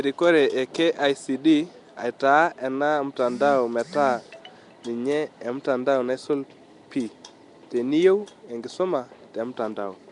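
Throughout, the speech sounds rough, hissy and underwater-smeared, with nothing above 10.6 kHz. Likely Nellymoser compression, filling bit-starved bands with noise.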